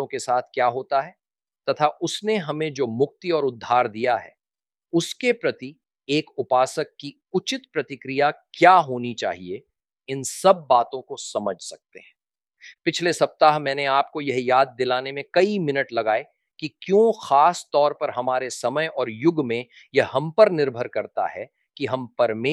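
Nothing stood out as a technical problem on listening to this audio.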